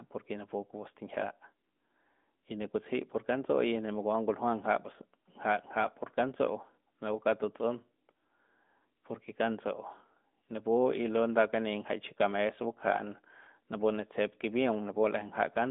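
Throughout, the speech carries AMR narrowband mobile codec damage: a vocal-tract model rebuilt from sparse pulses gives a plainly buzzy, synthetic edge, which fits a 10.2 kbps mode. A spectrogram shows energy confined to 200 Hz to 3.6 kHz, blank above 3.7 kHz.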